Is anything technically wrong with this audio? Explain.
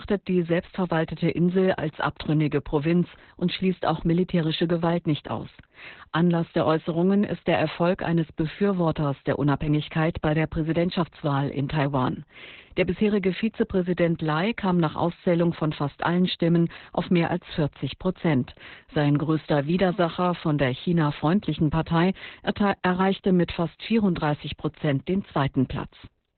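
Yes. Opus voice compression runs throughout the speech. Nothing is present above about 4.3 kHz, pointing to narrowband SILK coding at a very low bitrate, around 8 kbps. The coarsely coded excitation leaves the voice heavily muffled, hoarse and slightly robotic.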